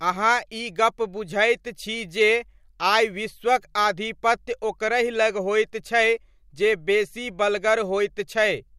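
Nothing stood out as a technical fault on listening to this speech recording.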